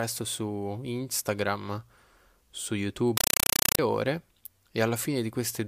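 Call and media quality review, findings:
Loud chattering static replacing speech, 3.17–3.79 s, 5.33 ms bursts 31.25 times per second. Compressed stream played as audio: undecoded AC-3 frames taken as PCM samples.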